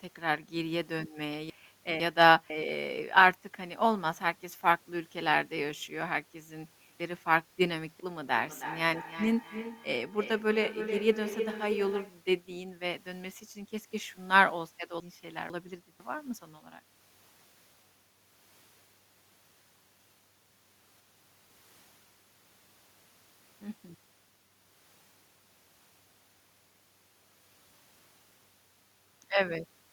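At 1.5 to 2.5 s and again at 7.0 to 8.0 s the speech briefly jumbles. These are chunks out of order: a half-second block of audio arrived or was written late and plays after the half-second that should follow it. Nothing is missing, but the sequence is swapped, leaving three abrupt seams within each second-long stretch.

From 8.27 to 12.22 s each phrase returns at a steady interval of roughly a third of a second, growing thinner and more ringing with each pass. At its loudest the echo sits about 10 dB below the speech. This is feedback echo between two devices in the same room on one call. One device plays what the other's microphone picked up, and that microphone captures it again. Each device's echo canceller removes only its own playback, so the loop keeps circulating.

The same jumbling returns at 15.0 to 16.0 s, again with one half-second block played a step late. At 20.0 to 21.5 s it is longer: a half-second block is held back behind the two blocks that follow it, so a second of later audio plays first. 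The jumble lasts a second and a half.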